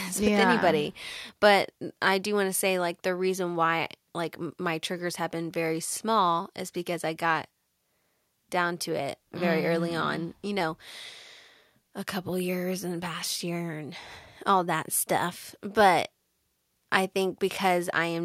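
No technical faults are audible.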